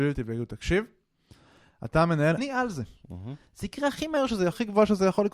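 From 2.34 to 2.38 s, damaged data in the compressed stream makes the decoder lose sync, giving a brief glitch.

From 3.26 to 4.17 s the speech runs about 6% fast and roughly a semitone sharp, harmonics visibly shifting upward, then snapping back, likely a drift correction step.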